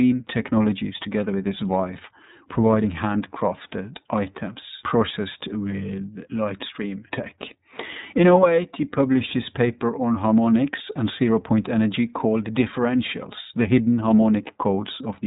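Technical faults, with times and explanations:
Throughout, iLBC codec. The speech has nothing above 3.8 kHz, so it sounds boxed in and telephone-like. The codec rebuilds each 30 ms frame on its own, without drawing on the frame before. This makes the voice plainly rough and slightly synthetic, with a buzzy, grainy edge. Consonants lose their crisp top end. The 30 ms framing fits the 13.33 kbps mode of iLBC, which trades fidelity for robustness against lost packets.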